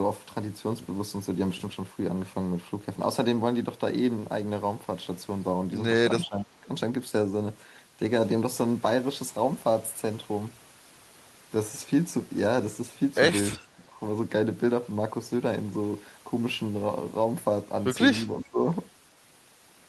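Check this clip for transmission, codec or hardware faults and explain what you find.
Three short dropouts stand out, at 6.24 to 6.66 s, 13.58 to 14.0 s and 18.25 to 18.63 s. The speech sinks by roughly 10 to 15 dB. This is likely speech suppressed in double talk: an echo canceller could not separate the talker from the loudspeaker echo of overlapping far-end audio and attenuated everything.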